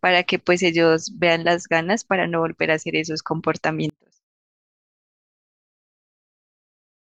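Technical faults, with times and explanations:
3.90–7.08 s, one channel inverted: from 3.90 s to the end, the speech collapses by about 36 dB, leaving only a faint residue rather than true silence. This is likely one stereo channel with reversed polarity. When the two near-identical channels are summed to mono, the shared centred voice cancels and only their small difference survives. Unlike a dropout or mute, a ghostly trace of the speech remains.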